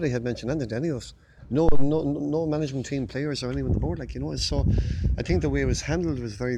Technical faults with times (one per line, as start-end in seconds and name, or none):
1.69-1.94 phantom power thump